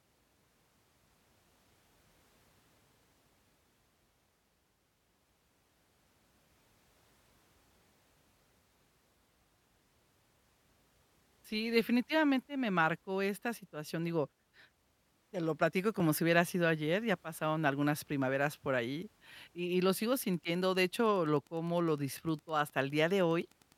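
From 19.84 s, just after "por allí y y", to the end, the audio circuit rectifies the beacon bursts from a nearby Wi-Fi radio. This Wi-Fi interference is heard as a faint, steady tick every 102.4 ms, about ten per second, well below the speech.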